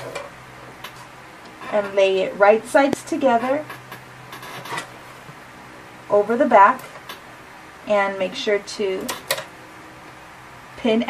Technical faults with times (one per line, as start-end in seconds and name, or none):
2.93-2.95 loud pop